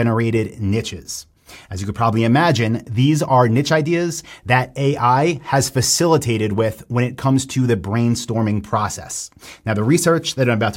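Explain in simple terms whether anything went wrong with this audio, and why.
Nothing went wrong: the speech recording has no audible dropouts, clicks, distortion or other technical faults anywhere along its run.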